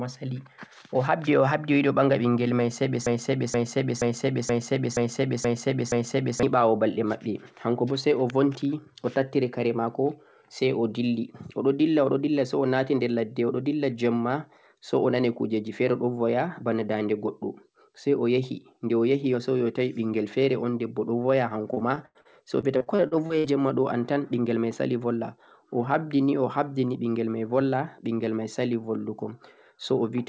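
From 3.06 s to 6.43 s the speech falls into a broken-record loop. A fragment of about 0.48 s plays back to back seven times, identical on each pass. The likely cause is a player or stream that stalled and kept re-sending the last chunk it held, so the audio that belonged in those three-plus seconds is simply gone. What sets this apart from packet loss is that the repeats are clean and exact, with no choppiness or metallic colouring.

Between 21.74 s and 23.47 s comes repeated packet loss, heard as robotic sound. Twelve gaps land in under two seconds, the longest 90 ms. Each is patched by stretching the sound just before it, so roughly a quarter of the stretch is filled-in audio. The speech stutters and buzzes with fragments missing. Unlike the loop, no whole piece recurs: the audio keeps moving forward, only broken and smeared.

Throughout, the call path leaves nothing above 8 kHz, which fits a wideband codec such as G.722.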